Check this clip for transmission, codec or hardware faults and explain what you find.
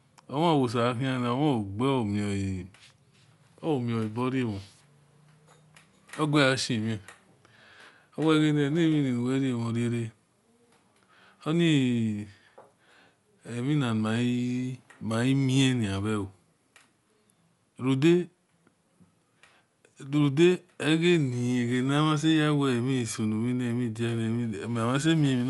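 There is one fault, present throughout the speech. Dolby Digital compression, throughout: the band stops sharply at 11.4 kHz, which fits a low bitrate around 64 kbps. The coder likely starved many frequency lines of bits, leaving the sound dull, with rough, fluttering noise around voiced tones.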